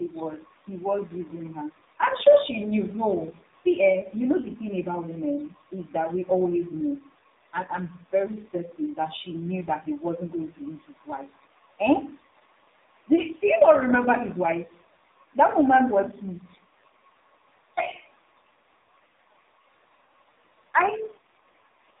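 From start to finish the speech passes through the AMR narrowband mobile codec, and its heavy damage points to a low mode around 5.9 kbps. Nothing above 4 kHz survives, and the voice turns buzzy and synthetic. A plain telephone-band filter would dull the sound without that pulse-driven buzz. The faint room noise, about 47 dB below the speech, stays in the background.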